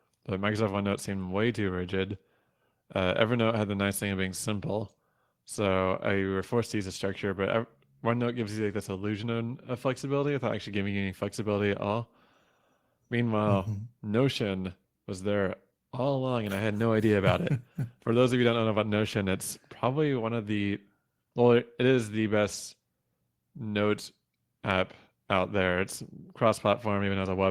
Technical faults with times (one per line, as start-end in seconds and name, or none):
none